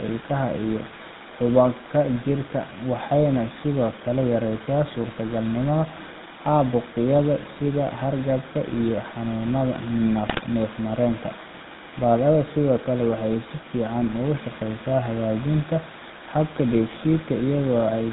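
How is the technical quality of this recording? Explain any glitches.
The recording has been through an old mobile-phone speech codec throughout, with one brief burst of corruption near the 10-second mark.

GSM full-rate codec, whole clip: the speech is modelled as a vocal-tract filter fed by regularly spaced pulses, so it sounds buzzy and gravelly, with nothing above 4 kHz.

GSM bit errors, 10.28 to 10.44 s: corrupted filter, pitch or gain values over roughly eight 20 ms frames distort the spectrum and level, producing squawks, pops and gargling.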